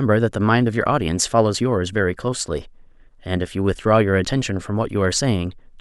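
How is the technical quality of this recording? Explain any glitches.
No glitches or technical faults can be heard anywhere in this speech recording. There is nothing here that needs explaining.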